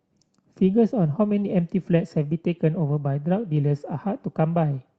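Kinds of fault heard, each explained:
Nothing stood out on listening to the speech in this clip.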